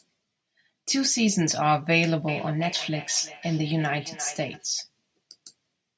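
Speech carries a feedback echo between two devices from 2.28 to 4.68 s: sound returns at a fixed spacing of roughly 300 ms, peaking about 13 dB below the speech. Unlike room reverberation's smooth tail, these are distinct repeats, as another device replays this microphone and it recaptures them.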